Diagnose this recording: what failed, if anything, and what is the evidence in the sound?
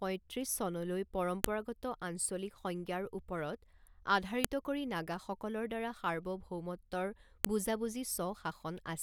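Storage or file assembly stage: a file header played as audio. Sharp, loud clicks occur at 1.44, 4.44 and 7.45 s, exactly 3 s apart. The second falls just before "কৰি নাগাসকলৰ দ্বাৰা সাৰ্বভৌমত্বৰ" and the third just after it. The speech was joined from 3-second WAV pieces without stripping their headers, so those header bytes play back as raw samples.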